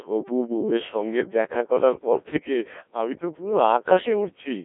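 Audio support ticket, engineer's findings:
Codec 2 vocoder throughout: speech resynthesised from pitch, voicing and envelope, so robotic, buzzy tone; low bitrate fits about 1.3 kbit/s; band roughly 250 Hz to 3.5 kHz, nothing above 3.6 kHz.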